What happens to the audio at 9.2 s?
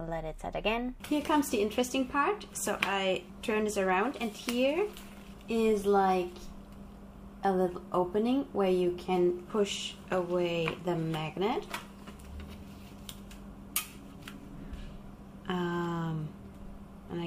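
Nothing goes wrong at 9.2 s; the audio plays through that moment intact, with no dropout, click or distortion.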